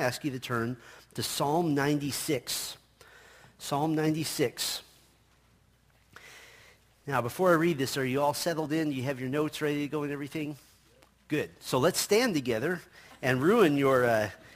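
Throughout, sample clock jitter near 10 µs adds hiss about 20 dB down. Unlike steady background noise, it swells with loud, bright sound and vanishes in silence.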